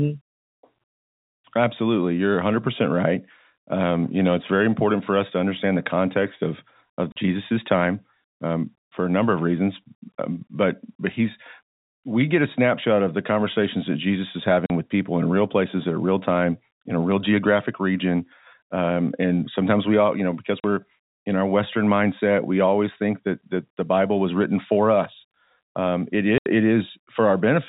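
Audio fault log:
7.12 s, 14.66 s, 20.6 s, 26.38–26.46 s: packet loss filled with silence. Gaps of 40 ms (80 ms last), which fits 20 ms packets, drop out after "understand the context of", before "with people in real", and after "all you know because". Hard edges bound each gap in the G.711 telephone band.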